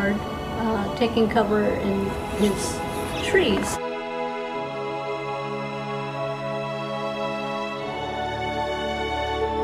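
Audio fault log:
Nothing to flag here, as no faults turned up anywhere in the clip.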